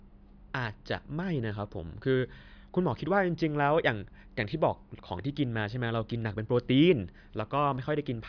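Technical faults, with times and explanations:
No technical faults are audible anywhere in this recording.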